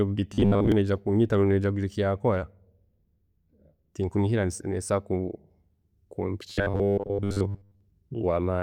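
Speech clip with robotic sound from repeated short buffers at 0.34–0.72 s and 6.50–7.81 s: a rigid 100 Hz buzz, likely from a 10 ms buffer looping while most real audio is skipped. Spectrograms show flat harmonic stripes; waveforms show identical repeating cycles.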